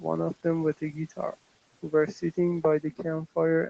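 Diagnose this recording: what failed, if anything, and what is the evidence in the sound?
Call processing: speech cut by the noise suppressor. At 0.77–1.35, 1.91–2.38 and 2.82–3.05 s, speech fragments sink about 16, 9 and 15 dB, misread as background.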